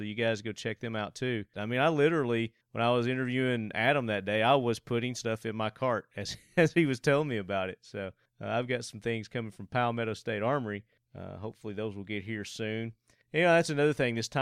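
Nothing in this recording trips any alarm: no dropouts, clicks, glitches or other faults turn up anywhere along the way.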